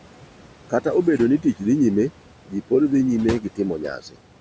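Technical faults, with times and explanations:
Throughout: noise suppressor artifacts. The room noise, sitting about 18 dB below the speech, gets pulled down by about 12 dB in whichever bands the suppressor judges steady, frame by frame, so the background sinks in the pauses and swells back under the speech.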